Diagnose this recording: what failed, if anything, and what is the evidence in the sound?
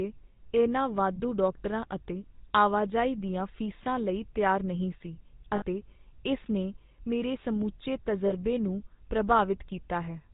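The whole recording has a buzzy, gravelly roughness, with nothing above 4 kHz, so the speech sounds dull and grainy throughout. That is the GSM full-rate codec, a failure at the codec stage. It models the vocal tract with a short filter and excites it with a regularly spaced pulse train that keeps only every third sample. The level of damage is plainly audible and fits the 13 kbps full-rate GSM scheme.

At 5.56 s the sound briefly freezes into a rough, metallic ring for about 60 ms, and the same happens at 8.26 s for about 40 ms. These are lost GSM frames, a transmission or network-stage failure. The decoder had no valid data for those stretches, so it reused the last good frame's parameters. Both gaps are short enough that the ring never fades to silence.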